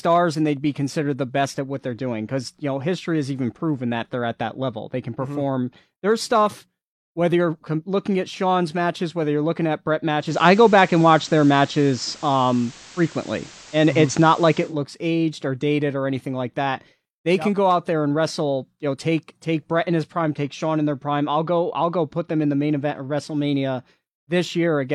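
From 10.17 to 14.76 s the receiver loses its digital signal and cross-fades over 186 ms to the FM analogue broadcast, a digital radio blend to analogue. The speech shifts in level by about 5 dB and carries hiss roughly 25 dB down.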